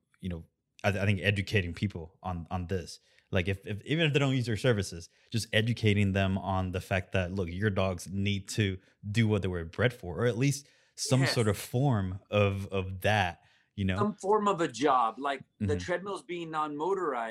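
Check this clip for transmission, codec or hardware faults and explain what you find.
Nothing on this speech recording points to a transmission, codec or hardware fault.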